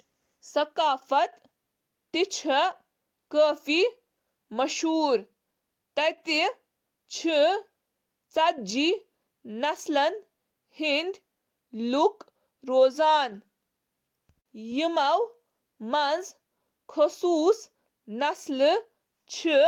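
No technical faults can be heard anywhere in the speech recording, with the signal level, continuity and timing holding steady throughout.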